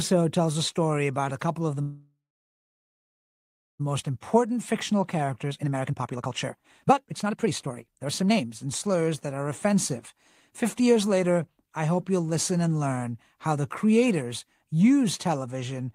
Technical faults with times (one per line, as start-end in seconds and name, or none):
1.81-3.81 call audio freeze
3.95-9.73 jitter buffer speed-up
10.13-11.20 jitter buffer speed-up